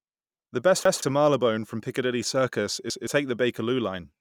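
At 0.85 to 1.02 s and again at 2.90 to 3.07 s, a 0.17 s stretch of speech plays twice with a hard join, and about 150 ms of audio is skipped. This is a repeated buffer: fresh audio arrived late, so the device replayed its last block, which fits an 8192-sample buffer.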